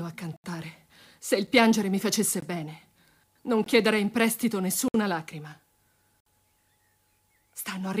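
From 0.09 s to the end, periodic USB or driver dropouts tick every 64 ms. Something stalls the audio path at that rate, and tiny slices are skipped.

Blocks of digital silence cut in at 0.36 to 0.44 s (about 76 ms), 1.47 s, 2.40 to 2.42 s, 3.64 to 3.66 s, 4.88 to 4.94 s and 6.20 to 6.26 s. The output buffer likely went unfilled, so samples dropped to zero. The short ones sound like ticks, and the longer ones like brief holes.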